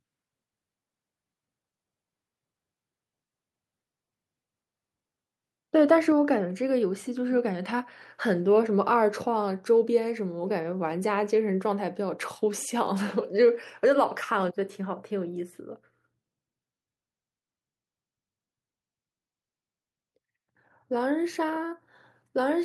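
At 6.12 s the speech and its background drop together by about 4 dB in a single step, a microphone volume stepped down, likely the call software cutting the device's input gain. Unlike gradual automatic gain riding, the level falls instantly and stays lower afterwards.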